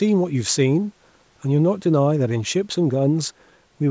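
Speech, with no technical faults.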